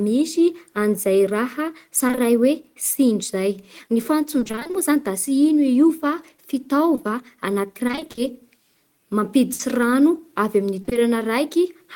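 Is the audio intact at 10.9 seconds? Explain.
No, 10.9 s falls inside a stretch of repeated packet loss (robotic sound) from 10.81 to 10.97 s. Four short holes, none longer than 20 ms, get patched by stretching the previous sound, so half that span is filler. It comes across choppy, with pieces missing.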